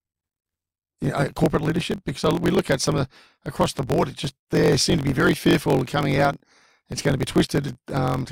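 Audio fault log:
Throughout, block size mismatch (truncated): a steady buzz at about 45.9 Hz sits under the speech, which also runs 1.07 times too fast while keeping close to its normal pitch. One stage hands over longer blocks than the next one takes, so the tail of every block is dropped. That fits blocks written at 1024 samples, and each cut adds a click at the block rate. The unchanged pitch rules out a sample-rate error, and the faster pace, with no silent gaps, rules out the padded form.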